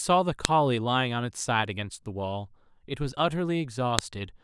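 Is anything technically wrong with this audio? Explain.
Yes. At 0.45 s and 3.99 s the speech carries a file header played as audio: leftover WAV header bytes from joined pieces play as samples, giving sharp, loud clicks.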